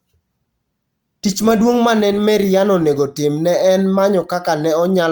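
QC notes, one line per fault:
Nothing to flag here, the speech comes through without any technical problems worth noting.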